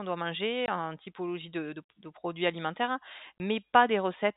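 At 0.66 to 0.68 s, between "doit manger" and "en typologie", the speech drops out completely for 20 ms. At 3.38 s, right after "produits alimentaires hein", a second hole of the same kind appears. This is packet loss filled with silence. Each gap fits one lost 20 ms packet, and the receiver played nothing in its place. The cuts have hard edges. Around them, the G.711 telephone coding keeps everything below 4 kHz.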